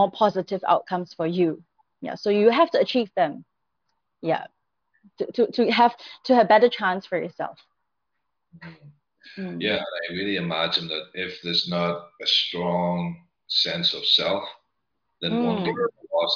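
No technical faults are audible.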